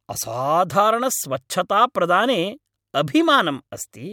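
No technical fault can be heard anywhere in the speech. There is nothing to mark at any point in the recording.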